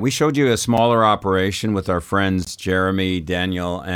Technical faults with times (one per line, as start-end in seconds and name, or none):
0.77 block of digital silence
2.45-2.47 block of digital silence